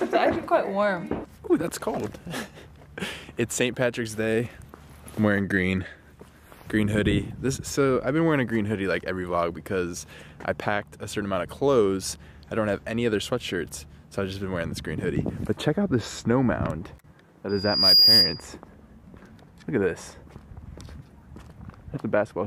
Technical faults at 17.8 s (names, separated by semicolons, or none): loudspeaker feedback squeal